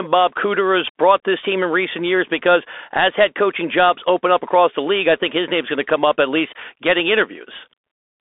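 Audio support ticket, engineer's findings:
Bluetooth CVSD headset codec, whole clip. Speech band-limited to roughly 300 Hz to 3.5 kHz, nothing above 3.7 kHz, which fits a 64 kbps CVSD headset link. Delta modulation at one bit a sample with an adaptive step: granular hiss under speech, scratchy s sounds, slope overload on loud high content. Codec damage plainly audible. Probable component: headset link in narrowband call mode.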